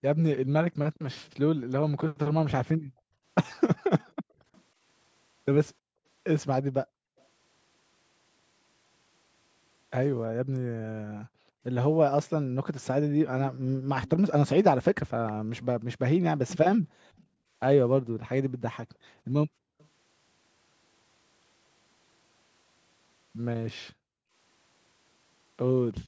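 From the start to 7.17 s, the room background is gated by the echo canceller. While the far end's loudspeaker is active, the canceller clamps the microphone down by as much as about 40 dB, so the ambience repeatedly dips or vanishes for around two seconds in total before recovering. On a waveform the noise floor collapses to near-flat stretches between bursts. On a spectrogram, the broadband background texture, which stops at 8 kHz as normal for call audio, shows dark vertical gaps.

Between 1.23 and 7.24 s, a faint delayed copy of the speech trails about 318 ms behind. It sits roughly 35 dB below the main signal, so it is heard as a faint trailing copy. This is most likely an echo leak: the canceller left part of the loudspeaker pickup in the signal, and that residue was sent back. On a spectrogram it appears as a weak, shifted duplicate of the harmonic patterns.

From 10.28 to 19.78 s, the same gating returns at the same depth of about 40 dB, now cutting the background for around four seconds in total.

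Overlapping this, from 14.07 to 19.88 s, the echo is much stronger, only about 15 dB down and again 318 ms late. It is plainly audible as a delayed repeat. The delayed duplicate shows clearly on a spectrogram, and its smaller peaks trail the main ones on a waveform.

From 23.91 s to the end, a brief final gating removes about half a second of background.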